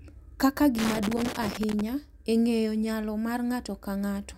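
A worn or dirty contact in the signal path repeatedly made and broke connection from 0.79 to 1.81 s, a loose connector crackle lasting about a second. The speech is chopped into irregular scratchy bursts, clearing just before "e ng’eyo nyalo".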